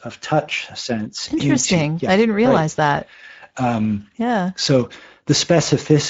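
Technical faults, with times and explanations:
Throughout, Speex codec damage: the speech sounds hoarse and noisy. The rate, near 17 kbps, points to a middle quality setting. At that setting the excitation gets too few bits, so the fine detail turns to noise.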